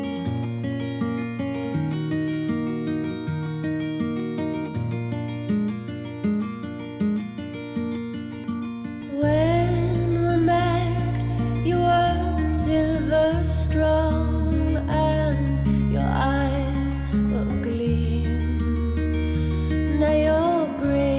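At 8.44 s the sound lurches forward with no gap: the material on either side is butted straight together, and roughly a second and a half of audio never plays. This is a skip ahead. The jitter buffer likely discarded a stretch that was already queued, because it overflowed while later packets were waiting, and then resumed from the newer audio. The delay dropped by about the same amount in that instant.

From 9.02 to 10.60 s the sound runs noticeably quicker without any change in pitch, at about 114% speed. Then, from 11.68 to 13.26 s, it becomes more obviously rushed at about 130%. Both are jitter buffer speed-up. The buffer held more audio than its target and shortened it by repeatedly removing small pieces one or a few pitch periods long. Around 200 ms was trimmed in the first stretch and around half a second in the second.

Throughout, nothing is heard above 4 kHz, which fits a G.711 mu-law call path at 64 kbps.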